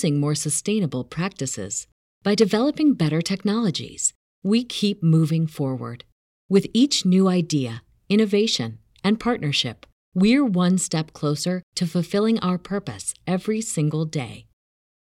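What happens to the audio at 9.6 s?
Nothing goes wrong at 9.6 s; the audio is intact there.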